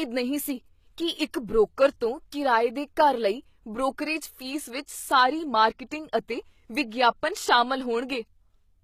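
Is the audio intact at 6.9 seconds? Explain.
No. At 6.91 s there is a pre-echo: a brief burst of hiss about 14 ms long sitting just ahead of a sharp attack, softening and smearing its onset. It comes from the codec spreading quantisation noise across a whole transform block, so noise meant for the loud attack also fills the quiet moment before it. On a waveform this shows as low-level noise rising before the transient; on a spectrogram, as a broadband smear leading the onset.

That moment also carries plainly audible codec damage from what is likely HE-AAC compression, which fits a bitrate around 20 kbps. The treble is rebuilt by copying lower bands upward, so harmonics fail to line up across the crossover, and s sounds come out gritty, metallic or lispy. A spectrogram shows the upper band as repeated copies of lower patterns rather than continuous harmonics.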